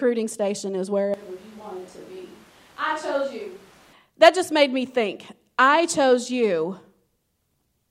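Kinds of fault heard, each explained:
Switch to a distant microphone: from 1.14 to 3.93 s, after "station is", speech abruptly turns roomy, hollow and thin, roughly 10 dB quieter, likely from a farther mic's pickup.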